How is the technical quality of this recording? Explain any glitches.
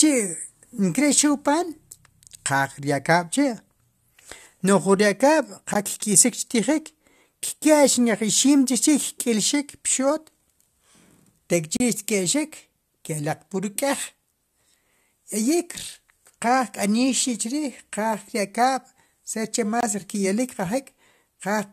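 The speech is interrupted four times by short silent holes. A gap between stream segments occurs at 5.74 s, from 11.77 to 11.80 s, at 15.79 s, and from 19.81 to 19.83 s just after "saber che." Each lands on a boundary between 2-second segments, where mismatched timestamps leave a hole the player fills with silence. The holes last roughly 14, 33, 4 and 24 ms. Each is a hard-edged dropout, with no audio lost around it.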